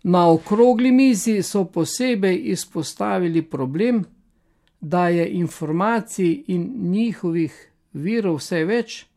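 No technical faults are audible in this recording.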